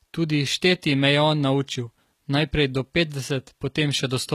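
Throughout the speech, plainly audible HE-AAC compression damage, likely from a low bitrate near 20 kbps, leaves gritty, metallic s sounds; a spectrogram shows copied-looking treble ending sharply at 14.9 kHz.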